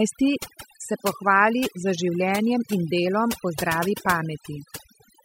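From the first moment to the last, there's overdone noise removal. The denoiser was pushed too hard, so it kills individual frequency bands whenever they dip near its noise estimate, and the softer parts of the speech vanish too. You get near-silent gaps with twinkly specks.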